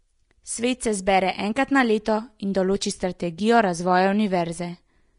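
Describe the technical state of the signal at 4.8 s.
At 4.8 s the speech carries likely Vorbis compression, present throughout. Nothing sounds above 10.6 kHz. Coarse treble quantisation leaves plainly audible hiss and grain, fitting a low bitrate.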